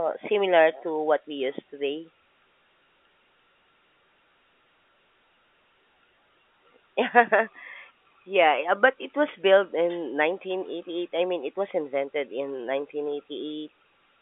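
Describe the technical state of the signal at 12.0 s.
At 12.0 s the speech is intact, carried over an ordinary telephone line whose band runs from about 200 Hz to 3.5 kHz.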